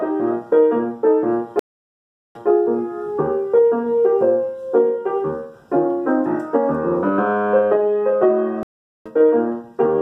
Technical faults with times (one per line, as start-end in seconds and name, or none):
1.59-2.49 stream reconnect
8.63-9.09 stream reconnect